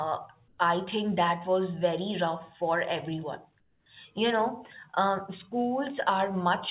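A speech recording in which the background is twice swapped for comfort noise: at 0.48 to 0.58 s, just before "I think that was", and at 3.6 to 3.86 s, right after "very rough for everyone". Each pause turns into steady, detail-free hiss, about 5 dB and about 7 dB quieter than the real room sound, likely from discontinuous transmission. Unlike a noise gate or a dropout, the audio never falls to true silence. All of it is band-limited to 4 kHz by the narrowband call codec.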